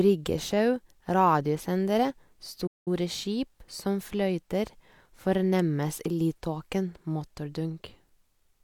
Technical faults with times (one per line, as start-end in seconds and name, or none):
2.66-2.88 playback stall